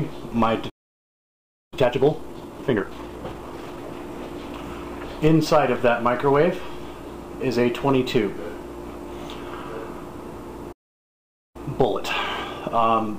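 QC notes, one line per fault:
0.69–1.74 s, playback stall: the sound just cuts out mid-flow and sits silent for about 1.02 s before coming back. A gap that long with nothing in it most likely means the player ran dry of data or its thread got held up, so output had nothing to send until it recovered.
1.74–3.78 s, time-compressed catch-up: right after the gap things come back hurried, running at 1.5x for about two seconds but at normal pitch. That's the player trimming its backlog by snipping out small slices and cross-fading the joins, which is where the rushed feel comes from.
10.72–11.56 s, playback stall: a second dropout, silent for about 0.83 s, again most likely a starved buffer or blocked playback thread.
11.56–13.18 s, time-compressed catch-up: a gentler catch-up this time at 1.1x, running to the end of the clip. Pitch stays put and the speed-up comes from spliced, cross-faded chunks.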